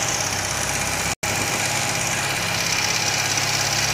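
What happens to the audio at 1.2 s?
The sound drops abruptly to silence from 1.14 s to 1.24 s, a hole of about 96 ms, then resumes further along. It is a digital broadcast dropout: the receiver muted when frames went missing or failed their checks, which fits about three lost frames.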